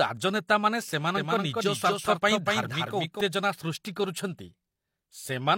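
From 1.17 to 3.21 s, just before "ସୃଷ୍ଟି କରୁଛନ୍ତି", a clean copy trails about 200 ms behind, some 5 dB quieter: a doubled audio track, likely from a second capture path or an out-of-step edit.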